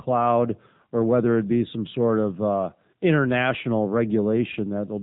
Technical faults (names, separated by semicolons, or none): AMR narrowband mobile codec